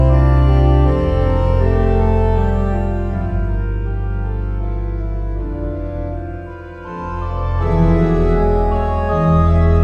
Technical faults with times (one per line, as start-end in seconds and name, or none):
none